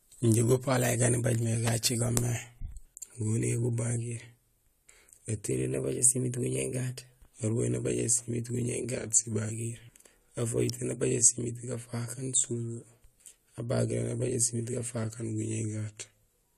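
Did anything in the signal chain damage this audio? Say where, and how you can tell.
Yes. Two electrical switching spikes, at 1.67 s and 10.70 s, are heard as sharp snaps over the speech. They most likely come from a nearby switch or motor arcing into the analogue wiring. Each shows as a needle on the waveform and a thin full-band vertical line on a spectrogram.

A drift correction step likely occurred at the buffer stage, where clock-matching software changed the playback rate. From 5.51 to 7.35 s, just before "arubahéén nabajé", playback runs 6.11% fast, about 103 cents sharp. It runs 6.11% slow, about 109 cents flat, at 8.97–9.52 s and from 14.98 s onward. On a spectrogram, the harmonics shift as a block at each boundary.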